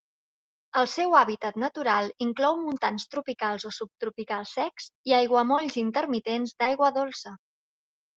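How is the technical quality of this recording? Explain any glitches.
The speech has two short concealed packet losses, at 5.56 to 5.60 s, right after "o subtropicals secs i", and at 6.64 to 6.68 s. In each, about 20 ms of audio never arrived, and the receiver extended the preceding sound to cover the gap before crossfading back, leaving a brief smear or wobble.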